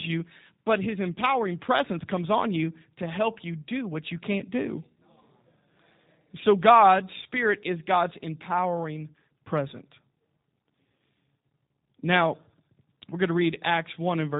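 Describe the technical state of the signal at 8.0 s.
At 8.0 s you're hearing G.729 codec damage, and it's there for the whole clip, not just this moment. The sound points to the low-rate G.729A flavour at around 8 kbit/s: speech rebuilt from a vocal tract filter, a pitch predictor and a handful of pulses per frame, with nothing above 4 kHz. So the speech is band-limited and dull, slightly rough and a bit synthetic, with a processed edge.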